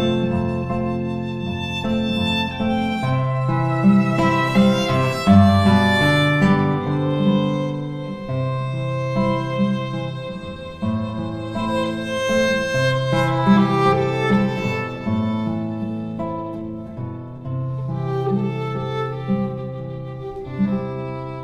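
Nothing here stands out as a technical fault: no dropouts, glitches or distortion turn up anywhere along the way.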